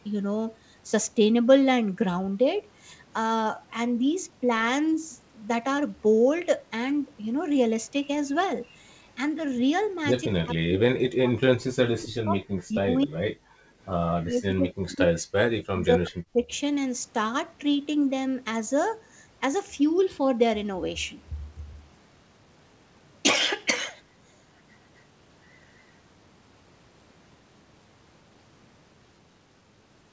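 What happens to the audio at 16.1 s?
The speech dips sharply between 15.64 and 16.51 s, falling by as much as about 40 dB for most of that span. This is likely speech suppressed in double talk: the echo canceller mistook the talker for loudspeaker echo while both sides spoke, and turned the talker down.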